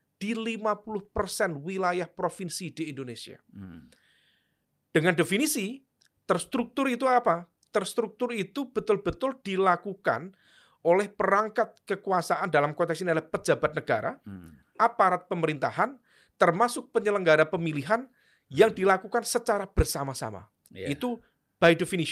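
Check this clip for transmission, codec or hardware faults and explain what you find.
Two related faults run through the whole clip. Both come from the sender and receiver keeping time at different rates.

Clock drift between sender and receiver is present throughout. The sender's clock runs about 4 percent fast. Audio arrives quicker than the receiver plays it out. Its jitter buffer keeps filling up. That overflow has to be shed somehow.

Repeated timing corrections run from 0.13 s to 21.96 s. The receiver keeps cutting short pieces to stay in step, so playback runs at 104 percent. The cuts are small and unevenly spaced. Any that are heard come across as slight hiccups or an unsteady tempo.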